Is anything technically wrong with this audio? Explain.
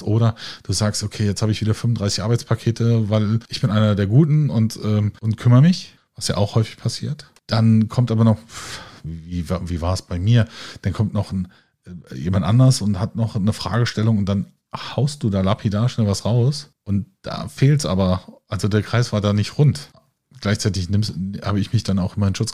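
Yes. From 0.12 s to 22.52 s the speech carries clock slip clicks: a soft rattle of ticks about every 30 ms, likely from unsynchronised clocks roughly 700 ppm apart dropping or repeating single samples. A spectrogram shows them as evenly spaced faint vertical lines.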